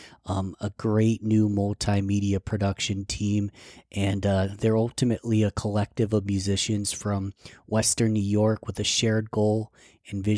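No technical faults can be heard anywhere in this speech recording. There is nothing to place on the timeline.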